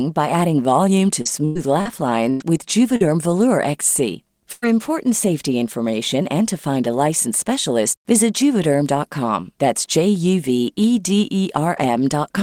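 From 1.21 to 3.02 s, just after "by adding volume to", there is repeated packet loss with a robotic sound. Packets went missing again and again. Five gaps open in this stretch, the longest 99 ms. Each hole is patched by stretching the last sound, about 315 ms in all. That covers 17% of the span. Some 320 ms of audio never arrives. The result is choppy and robotic, with pieces of speech gone.

At 4.52 s a burst of packet loss begins and runs to 4.65 s. It ends just before "important safety information and". About 100 ms in a row is lost. The receiver carries the last sound forward for 98 ms and lowers it as the gap goes on. You hear a held buzz or a fading hiss. Then the speech jumps ahead, with that piece missing.

Inside that burst, from 4.62 to 4.64 s, one lost packet was rebuilt from error correction. The next packet carried a low-bitrate copy, likely Opus in-band forward error correction. 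The decoder played it, so this 20 ms leaves no hole. The rebuilt frame sounds rougher and noisier than the audio around it. It sits right before "important safety information and".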